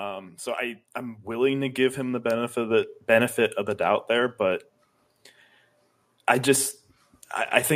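Automatic gain rising from 0.56 to 3.42 s: the gain control judged the speech too quiet and raised level by about 10 dB, swelling voice and background together before "of the doubt there".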